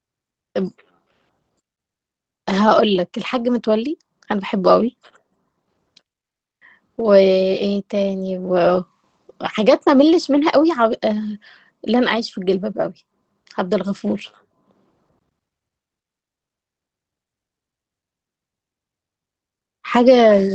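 There are no technical faults to describe in time order in this speech recording.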